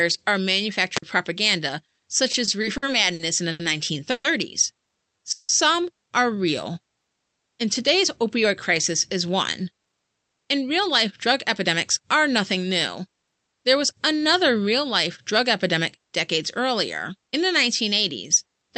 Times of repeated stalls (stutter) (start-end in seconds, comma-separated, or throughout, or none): 2.31-3.61